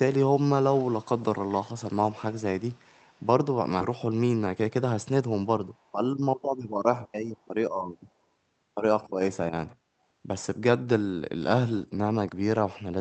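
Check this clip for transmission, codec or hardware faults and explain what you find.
Three kinds of fault are audible: an echo in two stretches, one forward jump, and a brief hurried passage.

Echo leak, 0.73–1.55 s and 2.59–3.27 s: a faint copy of the speech trails 163 ms behind, about 25 dB down, then about 35 dB down. This is likely a far-end echo canceller letting loudspeaker pickup through.

Skip ahead, 3.81–3.83 s: roughly 0.4 s of speech is dropped with no fill, so playback jumps straight forward and the two sides are joined abruptly.

Jitter buffer speed-up, 4.39–4.70 s: the buffer shed about 50 ms in pitch-period slices to cut delay, so speech runs at 112% speed, hurried but at unchanged pitch.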